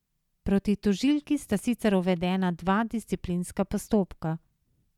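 No technical faults can be heard anywhere in this speech recording.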